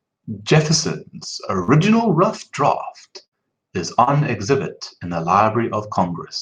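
A speech recording with packet-loss damage at three points. Short concealed packet loss occurs at 1.63–1.71 s and again at 4.04–4.10 s, between "draught is" and "exhibit in the". Each time about 40 ms of audio failed to arrive, and the receiver extended the preceding sound over the hole before blending back, leaving a brief smear or wobble. Inside both gaps, a lost packet rebuilt from error correction is audible at 1.68–1.70 s and at 4.07 s. There a 20 ms frame was played from the low-bitrate redundant copy carried in the following packet, so it sounds rougher and noisier than the surrounding audio rather than silent. A burst of packet loss at 3.26–3.35 s removed about 60 ms. Concealment held the last sound and faded it as the gap continued, producing a buzz or hiss before speech resumes with that stretch missing.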